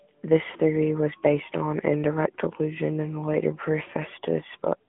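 Throughout, AMR narrowband mobile coding confines the speech to roughly 150 Hz–3.4 kHz, a spectrogram showing an empty band above 3.6 kHz, with buzzy, synthetic texture suggesting about 10.2 kbps.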